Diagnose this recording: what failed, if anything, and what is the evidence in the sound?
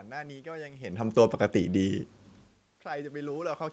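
From 2.84 s to 3.68 s the speech and the room noise behind it swell together, climbing by about 4 dB over most of a second rather than jumping. This is automatic gain rising in the call processing stage. The talker had moved away from the microphone around two and a half seconds in, dropping the input by about 22 dB. The gain control read that as a quiet source and ramped its gain up, lifting the background along with the voice.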